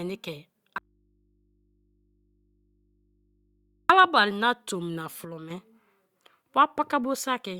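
At 0.78 s the speech cuts off abruptly and does not return until 3.90 s. For those 3.1 seconds only a low mains hum remains, roughly 40 dB under the speech. This is an audio dropout to a faint residue, likely a lost signal while the input stayed live.

From 5.25 s to 5.50 s the speech and its background noise both fall by about 6 dB at once, with no gradual fade. This sudden gain jump likely comes from a digital gain change applied instantly, without a ramp.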